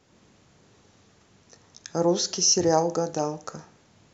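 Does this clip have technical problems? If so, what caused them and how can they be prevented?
Yes. Near the end of this speech clip, at 3.49 s, the stream most likely lost a couple of samples, a gap of only a tiny fraction of a millisecond. These are dropped samples. The waveform leaps straight from one value to a later one, and that sudden step is heard as a single sharp click, a thin vertical streak in the spectrum. No sound is removed. To prevent it, give the capture and processing chain enough buffer headroom and keep clocks in sync so no samples are skipped.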